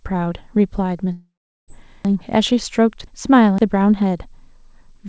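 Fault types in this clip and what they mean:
Long network dropout: From 1.12 to 1.70 s the sound stops being real and turns into a fading buzz, which likely means the packets never arrived and the receiver kept extending the last audio before giving up. About the final 0.39 s is near-silence, and roughly half a second of material is simply gone when the sound resumes. On a spectrogram, smeared, blurring harmonics fade into an empty band, with content ending at 8 kHz on either side. The waveform shows a decaying envelope, then a flat line.
Chunks out of order: Between 2.05 and 3.58 s, a 512 ms block of audio plays two blocks late, after the two chunks that should have followed it. Nothing is missing, but the sequence is scrambled and sounds jumbled, with three hard joins spaced on 512 ms boundaries. On a spectrogram, vertical seams appear where harmonic tracks jump abruptly rather than gliding. 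The waveform shows sudden discontinuities at those points, with no fade across the cuts.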